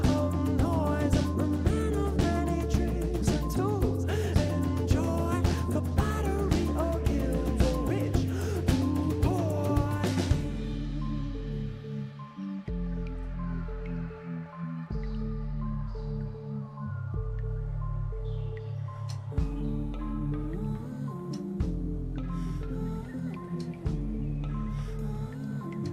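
No technical faults can be heard anywhere in the recording.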